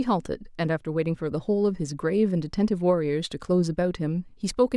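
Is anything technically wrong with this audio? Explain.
No, nothing technically wrong.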